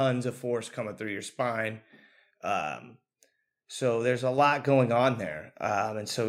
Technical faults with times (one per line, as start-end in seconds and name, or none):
4.38 microphone volume stepped up